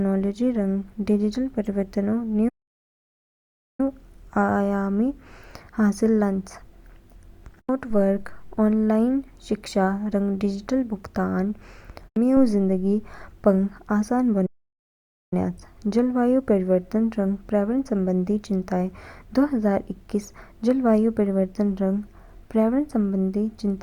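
At 2.48 s the speech halts abruptly and stays silent for about 1.3 s before resuming at 3.80 s; a second halt at 14.46 s lasts about 0.86 s, ending at 15.33 s. Both are a playback stall, likely the player starving for data or its thread being blocked, so output simply ceased mid-flow. On a waveform each gap is a flat, near-silent line; a spectrogram shows a blank vertical band with hard edges.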